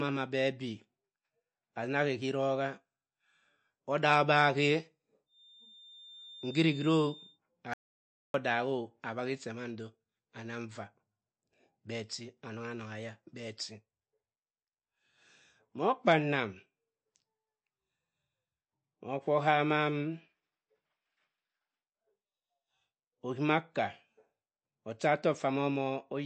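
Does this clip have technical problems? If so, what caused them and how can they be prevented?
Yes. Throughout the speech, MP3 compression is plainly audible as a watery, swirly texture with nothing above 8.4 kHz, which fits a low bitrate around 48 kbps. Short on bits, the encoder likely drops weak frequency lines, which flicker on and off between frames. A spectrogram shows a hard ceiling at 8.4 kHz with patchy, shifting holes beneath it. To prevent this, encode at a higher bitrate or keep an uncompressed master.

From 5.25 to 7.40 s a feedback whistle rings at a steady 3.6 kHz, about 20 dB below the speech. It likely comes from a loudspeaker-to-microphone loop sitting just short of building into a howl. On a spectrogram it appears as a thin horizontal line at 3.6 kHz. To prevent it, lower the monitor gain, move the microphone away from the loudspeakers, or notch out 3.6 kHz.

From 7.74 to 8.34 s an audio dropout to silence removes about 0.61 s. 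The speech cuts off mid-flow and returns abruptly, with no room tone in the gap, likely because the input was lost while recording continued. The waveform shows a flat line there, and the spectrogram shows a blank vertical band. To prevent it, secure cables and links, check for stray mutes, and monitor the input while recording.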